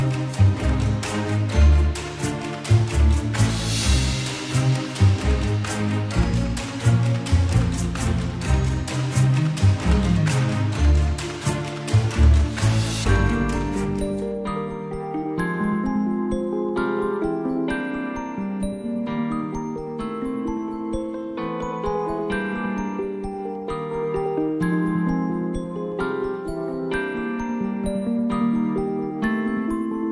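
No dropouts, clicks, distortion or level problems can be heard anywhere in the clip.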